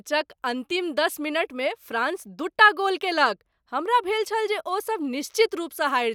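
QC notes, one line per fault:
No faults heard in clip.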